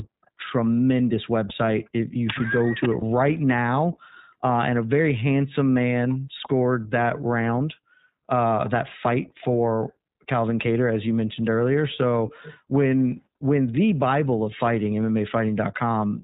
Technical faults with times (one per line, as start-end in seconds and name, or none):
0.00-16.23 iLBC codec
1.48-1.52 lost iLBC frames
3.00-3.03 lost iLBC frames